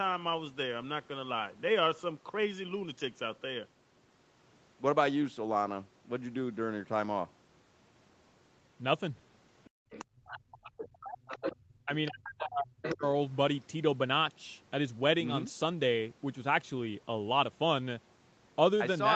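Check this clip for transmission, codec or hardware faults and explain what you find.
Three echo-canceller faults appear between 9.65 and 13.03 s, all clustered where the far end is heard through the loudspeaker.

Other side's voice leaking through: a second voice sits under the speech from 9.65 to 10.82 s, about 15 dB down, then returns in scraps at 11.27 to 11.51 s and 12.86 to 12.95 s, about 10 dB down. It is likely loudspeaker output the canceller failed to subtract. It is a foreign voice, not a repeat of the talker's own, so it is not a simple echo.

Background gated by the echo canceller: from 9.7 to 9.9 s the room tone drops by as much as about 31 dB for roughly a fifth of a second, then snaps back. The canceller clamped the microphone while the loudspeaker played. Only the background vanishes, which separates it from a dropout that would also cut speech.

Speech suppressed in double talk: from 10.28 to 13.03 s the talker's own voice dips and breaks up, with around two seconds affected in total and the deepest drops about 40 dB. 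This is likely the canceller muting both sides when they overlapped. Unlike the gating, it hits the talker, and it coincides with the far-end leakage.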